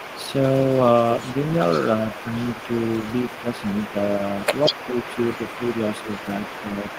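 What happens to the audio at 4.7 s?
Two things overlap there. From 4.7 to 5.17 s you get speech suppressed in double talk: the talker's level sags by roughly 5 dB in short pieces, adding up to about a fifth of a second. Most likely the far end started talking, and the echo canceller couldn't tell the local voice from its own loudspeaker pickup, so it ducked both.

Underneath that, an echo leak that began at 4.36 s is still running and carries on to the end. A faint copy of the voice trails about 187 ms behind, sitting roughly 15 dB down. The likely cause is a speakerphone whose echo canceller didn't fully remove what its mic picked up, so some of it came back down the line. The room noise is about 21 dB under the speech.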